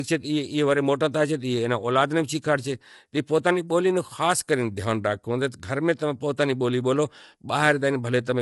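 It's a speech clip, and the whole thing sounds rough and grainy, with a lowered or synthetic top band, likely low-delay AAC compression at a low bitrate, around 32 kbps.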